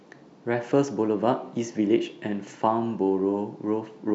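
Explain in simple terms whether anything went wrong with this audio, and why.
Nothing went wrong: the speech carries no audible dropouts, clicks, distortion or other technical faults anywhere in the recording.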